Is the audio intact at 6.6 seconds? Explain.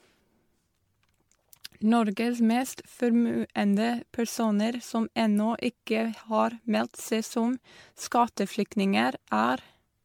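No. The sound at 6.6 s has generation loss, and it runs through the whole clip rather than starting there. The likely cause is that the audio went through MP3 decoding and re-encoding around seven times, at what sounds like 96 kbit/s. Each pass quantised it again on a shifted frame grid, so noise and spectral holes built up. At this point that comes across as swirly, smeared, hollow speech with blurred attacks, and nothing is left above about 19.9 kHz.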